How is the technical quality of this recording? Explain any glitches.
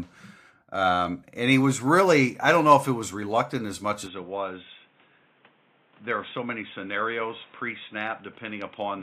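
One fault affects the second half of the recording. At 4.07 s, right after "was reluctant as much", the speech abruptly turns dull and boxy, with nothing above 3.8 kHz. It gets a few decibels quieter and has a new, faint noise floor. There is no gap at the change. The likely cause is an input switched to a poorer device, one that passes a narrower band, lasting to the end.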